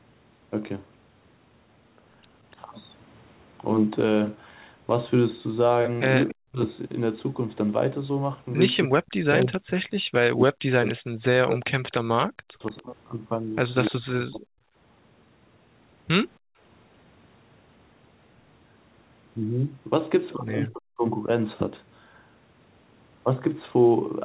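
A speech recording from a call. The talker's speech drops by roughly 40 dB at 6.31–6.6 s, 8.88–14.62 s (about 3 s affected in total) and 20.7–21.04 s, likely speech suppressed in double talk as the echo canceller ducked both sides. From 9.07 to 13.91 s, a copy of the speech delayed by 292 ms sits about 15 dB below the direct sound, likely an echo leak from a loudspeaker side's imperfect cancellation. At 16.39–16.59 s the room background is gated by the echo canceller, dropping by about 40 dB before returning.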